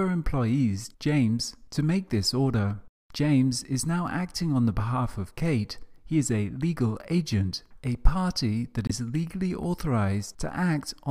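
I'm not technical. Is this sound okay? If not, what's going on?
No. At 8.87 to 8.91 seconds the sound cuts out abruptly for about 36 milliseconds. This is a corrupt frame muted. A damaged chunk of the compressed file couldn't be decoded, so the player filled it with silence. The timing stays intact.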